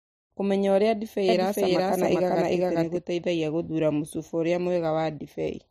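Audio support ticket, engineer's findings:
Doubled audio track, 1.29–2.97 s: full-band copy of the speech trailing by about 0.4 s at roughly equal level, dry, hard start and stop. Spectrogram shows every pattern repeated, shifted right. Likely a second, slower capture path mixed in.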